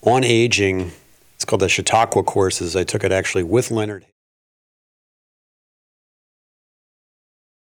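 No technical faults can be heard in the speech. The level fades out smoothly from around three and a half seconds, reaching silence at 4.13 s, with no click or hard edge.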